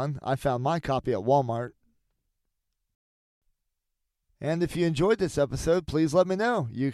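Speech, with no technical faults audible anywhere.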